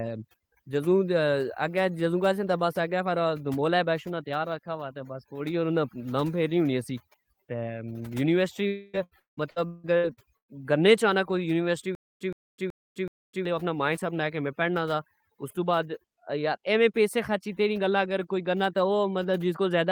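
Overdone noise removal runs through the whole recording: the background drops to near-silence with twinkling specks, which on a spectrogram shows as isolated flickering dots scattered across an empty floor.

At 8.67 s a long network dropout cuts in until 8.96 s. About 260 ms of audio is missing, replaced by a fading continuation of the last sound, which appears on a spectrogram as smeared, steadily decaying bands.

From 8.93 s to 10.60 s, repeated packet loss makes the speech choppy and robotic. There are seven gaps, the longest 178 ms, and 44 percent of the stretch is patched, showing as repeated blurred, frozen slices in the spectrogram.

Between 11.95 s and 13.45 s, a stutter with silent gaps repeats a 120 ms fragment four times. Each repeat is followed by about 255 ms of digital silence, giving a 376 ms cycle. The waveform shows identical bursts separated by flat, near-silent stretches, likely from a stream or player that stalled and retried.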